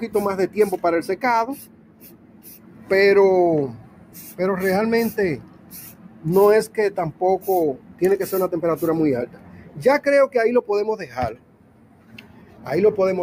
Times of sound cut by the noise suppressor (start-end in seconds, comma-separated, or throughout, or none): 1.61-2.90, 3.80-4.39, 5.38-6.25, 7.76-8.01, 9.26-9.79, 11.34-12.66